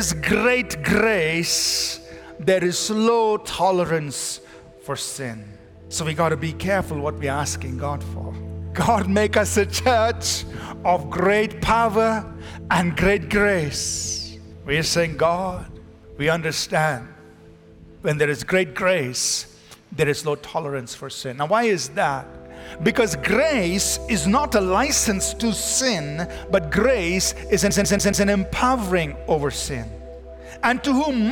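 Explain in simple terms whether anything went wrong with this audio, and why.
Something did go wrong near the end. From 27.71 to 28.26 s the sound gets caught in a CD stuck on one turn: the same 0.14 s snippet plays four times in a row, with a tiny gap of silence at each jump. A scratch on the disc knocks the laser back one track every time the disc comes round to that spot, so it keeps rereading the same sliver of audio. The result is the quick, even stutter of a skipping CD.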